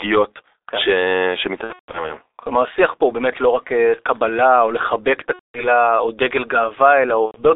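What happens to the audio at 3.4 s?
At 3.4 s you're hearing the same G.723.1 codec damage that runs through the whole clip. The speech is squeezed into a phone band of roughly 300 Hz to 3.7 kHz, so it's muffled, with nothing on top and thin lows. The coarse, heavy coding, at a rate that sounds like around 6 kbit/s, only refreshes its model of the voice in slow 30 ms chunks. That leaves the speech hoarse, with consonants smeared together.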